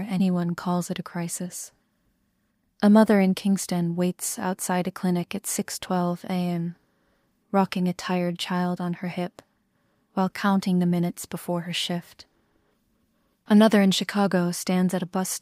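No technical faults are audible.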